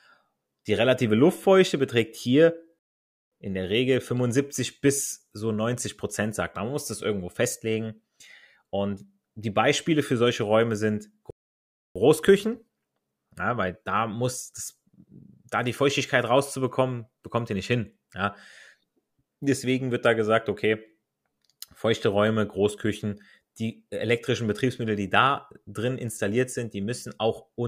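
Speech cuts to silence at 2.79 s for about 0.53 s, and again at 11.31 s for about 0.65 s, each time picking up exactly where it stopped. These are rebuffering stalls: playback ran dry of downloaded audio and waited, adding time without losing anything.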